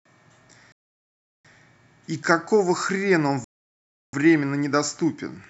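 Two rebuffering stalls, at 0.72–1.45 s and 3.44–4.13 s: the player starved for data, so the speech drops to silence, then resumes exactly where it stopped.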